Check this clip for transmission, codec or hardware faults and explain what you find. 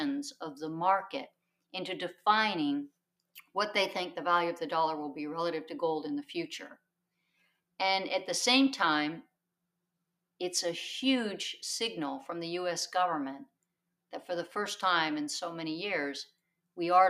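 The clip has one recurring fault: sound cut by the noise suppressor, at 1.28–1.74, 3.2–3.55, 6.75–7.79, 9.62–10.23, 13.46–13.94 and 16.31–16.77 s. Each time the suppressor misjudged steady or decaying sound as noise and pulled it down by about 21–22 dB, so tails shorten and sustained parts sink while onsets survive. Unlike a packet dropout, nothing goes fully silent; the level ducks for a fraction of a second.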